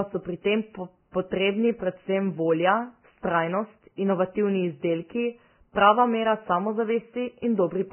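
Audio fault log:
Throughout: Vorbis compression, likely heavy. Nothing survives above 3.1 kHz, a cut-off that points to a very low bitrate near 10 kbps. Remaining treble detail is quantised into grainy hiss, roughening the speech and smearing consonant attacks. A spectrogram shows a hard ceiling at 3.1 kHz with speckled, noisy upper bands.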